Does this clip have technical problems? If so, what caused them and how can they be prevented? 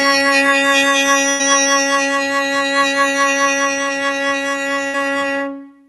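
Yes. A noise suppressor applied to music runs throughout the clip. It was designed for speech, so it treats sustained tones and reverb tails as noise and pulls them down by roughly 5 dB while attacks pass through. As a result the music pumps and thins out. To prevent this, disable speech noise suppression or switch to a music mode when capturing musical sources.

A burst of packet loss occurs at 1.29 to 1.41 s and again at 4.87 to 4.96 s. In each case the receiver extends the last audio into a fading fill, about 100 ms and 60 ms respectively, then resumes with that much music missing. To prevent this, use a more stable network path, a larger jitter buffer, or forward error correction.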